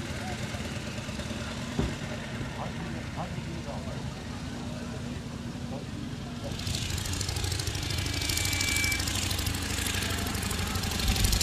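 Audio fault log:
7.71–9.14 s, loudspeaker feedback squeal: a single tone at 2.3 kHz rises out of the audio over roughly a second and settles at about 5 dB above the programme level until it stops at 9.14 s. The microphone is hearing the loudspeaker it drives, and at 2.3 kHz the loop gain around that path is greater than one, so each pass round the loop adds to the tone and it keeps growing until the loop is broken.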